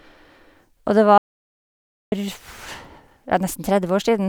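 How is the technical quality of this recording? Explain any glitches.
The recording has one clear glitch in its speech. An audio dropout to silence runs from 1.18 to 2.12 s. The input was likely lost for that stretch while silence kept being written, so the speech cuts off abruptly, about 0.94 s falls into dead silence with no room tone, and the speech resumes mid-flow with that portion missing.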